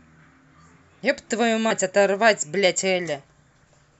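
Damaged data in the compressed stream appears from 1.70 to 1.72 s in this speech. A short run of corrupted bytes made the decoder misread the frames there and lose sync while it hunted for the next valid frame header, producing a brief glitch.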